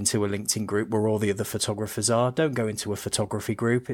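Speech recording, no audible technical faults anywhere in the clip.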